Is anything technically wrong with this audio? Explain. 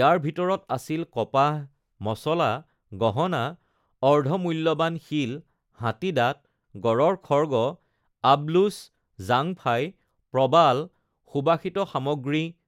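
No, nothing technically wrong turns up here; the speech holds steady the whole way with no glitches or problems to point to.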